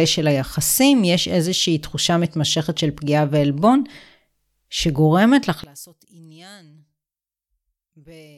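From 5.64 s to the end at 8.38 s, the speech collapses by about 27 dB into a faint residue. The likely cause is one channel inverted: with one stereo side's polarity reversed, everything common to both sides cancels when summed to mono, leaving only their small differences. A plain gain drop or dropout would keep the full tone or go silent. Here nearly all of the sound vanishes while a faint trace remains.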